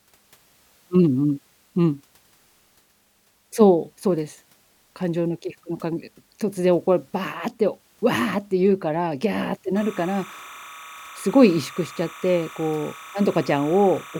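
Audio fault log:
9.76–14.20 s, timecode bleed: a chirping warble sits roughly 20 dB under the speech, flipping between pitches near 1 kHz and 2 kHz as the code's square wave leaks in. The regular rhythm fits 30-frame code, unlike a single steady whine or random data hiss.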